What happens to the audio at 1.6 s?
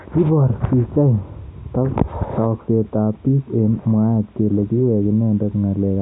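At 1.6 s the speech plays through intact, with no dropout, click, distortion or other fault at that moment.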